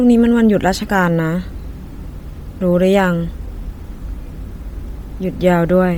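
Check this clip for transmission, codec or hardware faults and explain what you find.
There's one fault, and it runs through the whole clip: Bluetooth LC3 compression is the likely cause. The speech has a breathy, grainy edge across the entire clip, and the damage is heavy. LC3 codes audio in short transform frames, 10 ms here. When bits are tight, which fits a rate around 32 kbps, it zeroes much of the upper spectrum and fills those gaps with noise. That's the hiss-like texture you hear, even though the band still reaches 20.2 kHz.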